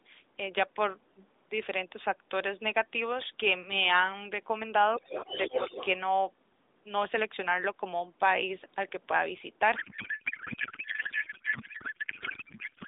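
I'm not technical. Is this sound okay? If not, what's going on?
No. From 4.92 to 5.86 s there is other side's voice leaking through. The phone likely played the far caller on its loudspeaker and failed to scrub that sound out of its own microphone, so a second, fainter voice briefly sits under the main one.

From 9.76 s to the end at 12.87 s there is a codec payload misread. The sending phone packed its compressed mobile-call data in one layout and the receiver unpacked it as another, so the talking turns into garbled noise and warble that barely tracks what was said.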